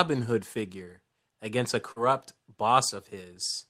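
From 1.91 to 2.01 s there is a burst of packet loss. A run of packets never arrived in time. The receiver stretched the last sound for about 46 ms and faded it down. That is heard as a held buzz or hiss that dies away. Then roughly 40 ms of the speech is simply gone. The talker jumps ahead when the audio resumes.

At 2.89 to 2.93 s comes a short concealed packet loss. About 20 ms of audio went missing before decoding. The receiver covered the hole by extending the preceding sound, then blended back into the real signal. The result is a brief smear or wobble rather than a silence.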